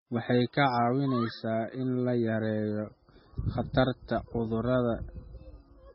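MP3 compression damage runs through the whole speech clip, with nothing at all above 5.6 kHz. The treble is cut at that fixed point and the quieter detail is sparse, so s sounds come out dull and chirpy, and the voice has a watery, swirling quality as weak frequency components drop in and out between frames. Damage this heavy points to a very low bitrate, on the order of 16 kbps, as the likely cause.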